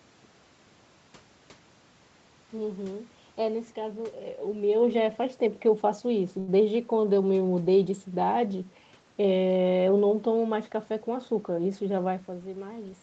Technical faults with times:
6.39-6.50 short stall from a late packet
11.21-12.05 jitter buffer speed-up

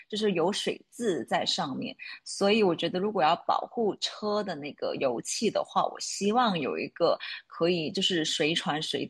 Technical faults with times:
none

